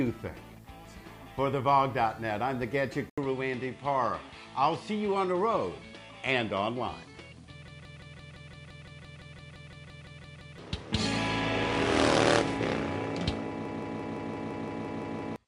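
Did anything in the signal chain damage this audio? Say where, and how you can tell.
Yes. At 3.10 s the input chain likely switched to a poorer device: the audio drops out for about 80 ms, then resumes with nothing above 10.7 kHz, so it sounds duller and boxier through to the end. A faint new noise floor, roughly 50 dB below the signal, appears with it, while the level stays much the same. A narrower-band microphone or headset profile taking over the capture path fits this sound.

A system hang loop at the driver and buffer stage appears twice, from 7.68 to 10.58 s and from 13.65 to 15.36 s. The machine froze while the hardware kept replaying one ring buffer, so a single 170.67 ms piece repeats exactly at 5.86 Hz, 17 times and then 10 times, giving a machine-gun stutter. That loop length fits an 8192-sample buffer. Roughly 3 s and 1.5 s of real audio are lost in the two loops.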